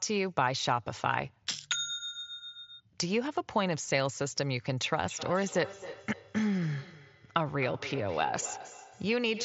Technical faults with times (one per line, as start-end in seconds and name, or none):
5.08-9.44 feedback echo between two devices